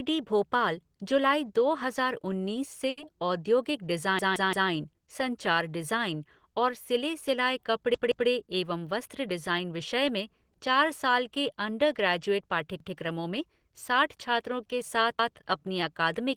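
At 2.89 to 3.00 s the speech holds on one sound for about 80 ms, a short stall from a late packet. The receiver stretched the last sound until the delayed packet arrived, losing nothing. On a spectrogram the harmonics run flat and smeared across that span.

A repeated buffer occurs at 4.19 to 4.70 s (three extra plays), 7.94 to 8.29 s (two), 12.80 to 12.97 s and 15.19 to 15.36 s (one each). Each time new audio arrived late and the device replayed the same piece of about 171 ms, which fits an 8192-sample buffer. It is heard as a stutter with a hard join at each repeat. The waveform shows identical blocks side by side, with vertical breaks in the spectrogram at the seams.

From 8.63 to 9.73 s comes a jitter buffer speed-up. The receiver was holding too much audio and cut out many short pitch-period pieces, about a tenth of a second in all. The speech runs about 8% faster at unchanged pitch and sounds hurried. 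Syllables look compressed in time while the harmonic spacing stays the same.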